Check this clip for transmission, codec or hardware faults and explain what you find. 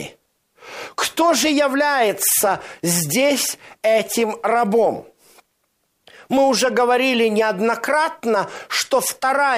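Nothing in this speech recording points to a transmission, codec or hardware problem; there's nothing there to flag.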